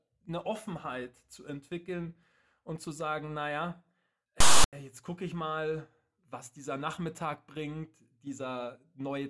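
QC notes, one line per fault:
4.40–4.73 s, file tags played as audio: after "und zu sagen naja", text tag bytes read as samples give a harsh rasp offset to one side, then zero padding drops to dead silence before "jetzt gucke ich mal". The waveform shows a hard-edged lopsided block then flatline; the spectrogram shows a broadband slab.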